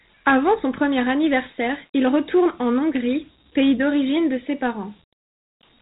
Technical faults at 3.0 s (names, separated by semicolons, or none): Dialogic VOX ADPCM